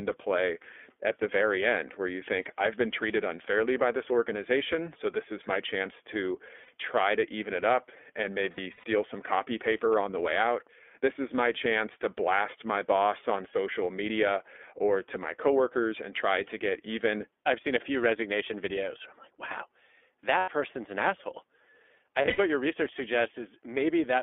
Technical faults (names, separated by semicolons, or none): iLBC codec; lost iLBC frames